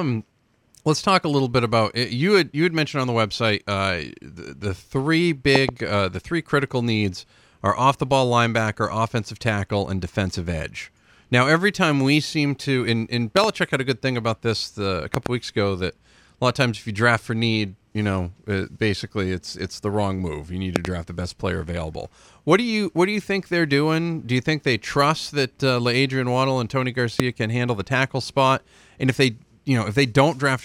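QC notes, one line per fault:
5.56–27.22 s, loud pop: five bursts at 5.56–5.71 s, 13.37–13.46 s (between "seem to in in" and "had a good thing"), 15.14–15.28 s, 20.76–20.87 s (after "wrong move you need") and 27.20–27.22 s. Each rises about 20 dB over the speech, a double pop in the first four and a single one at the end. A sudden voltage step, likely from a connector, switch or static discharge, is shaped into a sharp thump while the speech continues underneath.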